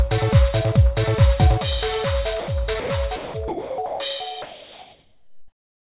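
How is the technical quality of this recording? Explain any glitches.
The recording has two related faults, both tied to the sender's voice detector, heard over a narrow call-quality band with nothing above 4 kHz, which fits G.711 mu-law coding.

Sound dropped by the voice detector: at 2.40 to 2.48 s, 2.80 to 2.90 s, 3.16 to 3.34 s, 3.48 to 3.78 s and 3.86 to 4.00 s, the sender likely judged the sound to be background and stopped transmitting, so the receiver filled each gap with comfort noise. The sound vanishes into steady hiss for 80 to 300 ms at a time, then snaps back.

Comfort noise in place of the background: from 4.42 s to the end, transmission stops and synthetic noise likely stands in for the real background, at about the same level, roughly 41 dB below the loudest sound. The background loses its natural texture and becomes a flat, featureless hiss for the remaining 1.5 seconds.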